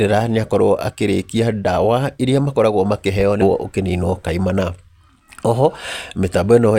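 Stream segment skipped at 3.41–3.47 s, after "ndawa iria makoragwo makĩheyo": the speech jumps ahead with a small blip, likely from one segment failing to load and being passed over.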